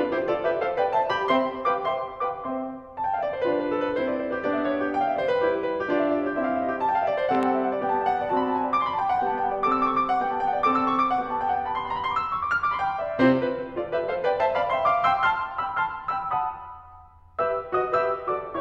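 A music clip with two loud pops: a double pop from 7.35 to 7.45 s and a single one at 14.40 s, each peaking roughly 10 dB above the music. They are likely voltage spikes from a plug, switch or static. They appear as tall waveform spikes and thin broadband vertical stripes on a spectrogram.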